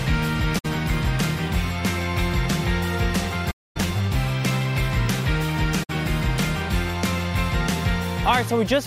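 There's AAC frame loss with muting at 0.58 to 0.66 s, 3.50 to 3.77 s, and 5.83 to 5.90 s. Dropped frames were decoded as silence, so the sound fades out and back in, leaving soft-edged gaps of roughly 64, 256 and 64 ms.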